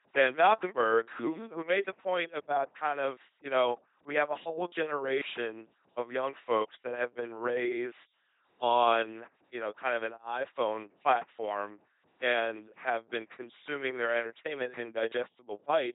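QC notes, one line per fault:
Throughout: LPC-10 vocoder. Buzzy, robotic speech with nothing above 3.8 kHz. Each moment is pulse or noise excitation, fitting a 2.4 kbit/s vocoder.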